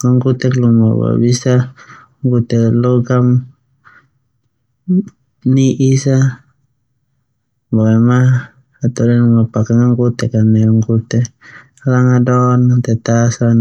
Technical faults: none

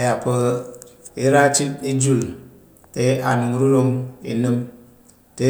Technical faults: none

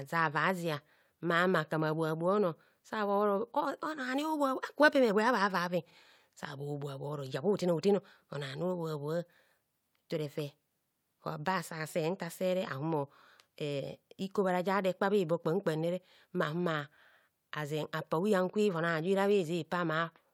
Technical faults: repeated frames

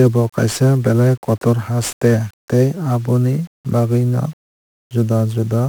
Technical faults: 1-bit DFPWM compression

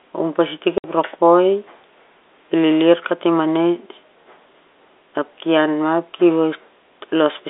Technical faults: packet loss filled with silence

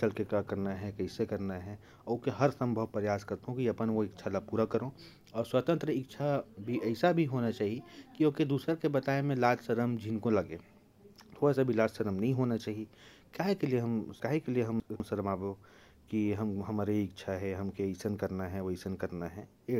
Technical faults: chunks out of order

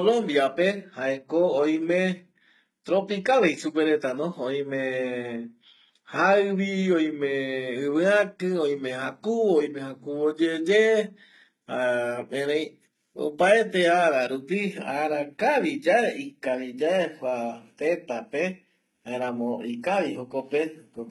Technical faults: HE-AAC compression

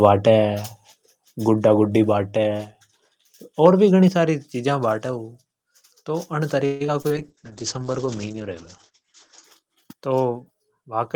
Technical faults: microphone volume stepped down; microphone overload; repeated packet loss (robotic sound); call bitrate drop

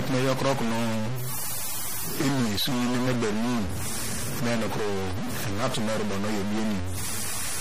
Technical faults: stuck bit; MP3 compression

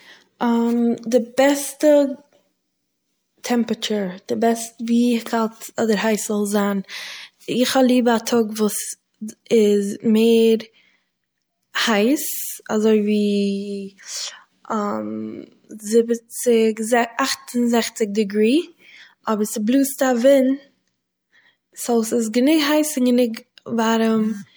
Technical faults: pre-echo

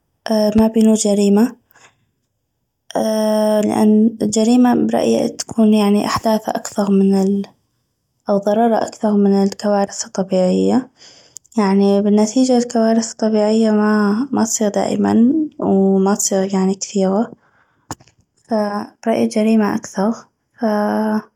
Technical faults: loud pop

